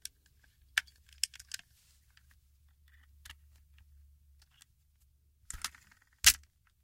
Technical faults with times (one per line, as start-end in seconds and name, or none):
none